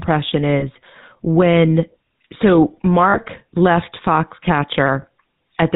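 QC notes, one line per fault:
Throughout: GSM full-rate codec. The audio has a buzzy, gravelly roughness, consistent with the 13 kbps full-rate coder. It rebuilds speech from a vocal-tract filter driven by a sparse, regularly spaced pulse excitation. Only a fraction of the excitation samples survive, so the fine harmonic detail is replaced by a coarse, rasping texture. On a spectrogram, energy stops sharply near 4 kHz with nothing above, and harmonics look smeared and grainy.
0.60–0.64 s, 3.10–3.19 s, 5.02–5.05 s: lost GSM frames. At each point the sound freezes into a short, rough, metallic ring instead of moving on. The decoder has reused the last good frame's settings. The gaps match roughly one 20 ms frame, then two frames totalling 40 ms, then one frame again. On a spectrogram, each shows a smeared, repeated vertical stripe pattern. On the waveform, each shows a brief repeated segment.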